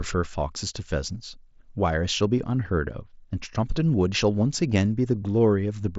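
A speech recording whose spectrum stops near 7.7 kHz, consistent with an mSBC Bluetooth headset path with light grain on louder syllables, shows channel delay (comb filtering) from 2.44 to 3.64 s. One channel runs a tiny fraction of a millisecond behind the other, which fits a delay of about two samples, and the mono sum cancels around 10 kHz. Because that notch sits above the band, its skirt is heard as a dulling of the top end across that stretch.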